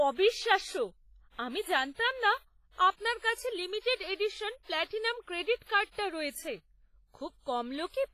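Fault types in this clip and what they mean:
WMA compression: The speech rings and sounds washy, with a hiss that swells and fades along with it. Nothing is heard above 15.4 kHz. Quiet detail drops out. This is likely a transform codec like WMA, and the heavy damage fits a bitrate near 24 kbps.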